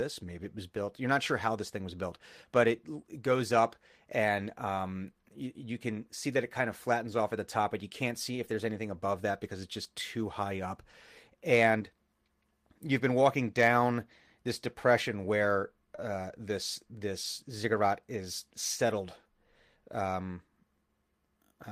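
At 7.09 to 7.11 s, between "that it kind of" and "off at the top", a roughened, noisy 20 ms blip is a lost packet rebuilt from error correction: the decoder played a low-bitrate copy carried in the next packet. At 15.95 to 15.99 s, after "down this depression where" and before "uh this", a brief smear marks short concealed packet loss. About 20 ms never arrived in time, and the receiver extended the preceding sound before blending back. The final part of that stretch, 15.98 to 15.99 s, was again rebuilt from the error-correction copy. The same grainy rebuild recurs at 17.24 to 17.26 s.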